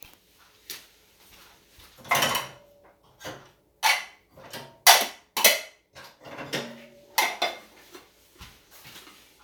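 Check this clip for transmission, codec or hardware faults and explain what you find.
No faults are audible anywhere in this recording.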